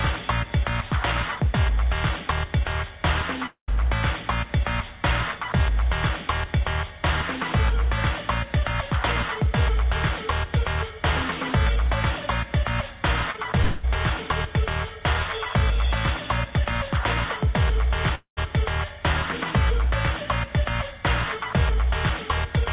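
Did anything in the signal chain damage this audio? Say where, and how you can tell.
Yes, the damage happened at the network stage of a call path whose G.711-style band limit leaves nothing above 4 kHz.

Long network dropout, likely, at 3.46 to 3.70 s, 13.62 to 13.85 s and 18.15 to 18.39 s. About 0.2 s of audio never arrived. The receiver stretched the last sound into a fading buzz. At 3.46 and 18.15 s this decayed into about 0.1 s of silence. At 13.62 s the fill covered the whole gap. On a spectrogram each one looks like smeared, flattened harmonics tapering off, and the waveform shows an envelope collapsing, sometimes to a flat line, before the sound resumes with the missing section gone.

Short concealed packet loss, at 13.32 and 13.36 s: two back-to-back 20 ms packets were lost just before the 13.62 s dropout. The concealment extrapolated the preceding sound and then crossfaded back into the real signal, which is heard as a brief wobble or smear. 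On a spectrogram it shows as about 40 ms of blurred, repeated texture.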